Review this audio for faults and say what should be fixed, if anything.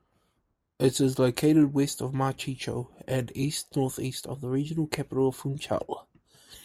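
No faults found in the speech recording; nothing needs fixing.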